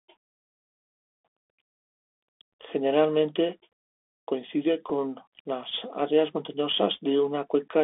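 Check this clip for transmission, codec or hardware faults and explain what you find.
Two faults are present: a Bluetooth CVSD headset codec across the whole speech clip, and two brief Bluetooth headset packet repeats.

The Bluetooth CVSD headset codec is audible throughout. The line band runs only from about 250 Hz to 3.5 kHz, and the damage is plain. The sound fits a 64 kbps one-bit delta coder whose adaptive step cannot keep up with fast, loud high content. That leaves scratchy sibilants, overload distortion on strong peaks and a granular hiss under the speech.

Bluetooth headset packet repeats occur at 4.89 s, just before "las áreas", and at 6.96 s. The chip replayed the previous packet's bits in place of lost data. The first gap is about 3.8 ms, which fits one packet. The second is about 7.5 ms, consistent with two. The first is heard as a small tick; the second, two repeats in a row, gives a very brief buzz near 267 Hz.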